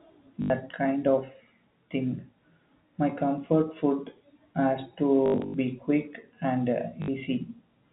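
Packet loss with last packet repeated, at 0.42 to 0.5 s before "kind of thing", 5.26 to 5.54 s between "comfort food has" and "be quick and", and 7.02 to 7.08 s. Lost audio was filled by replaying the previous packet, which fits 20 ms packets. This produces a robotic stutter buzzing near 50 Hz, heard through the narrow telephone band of G.711.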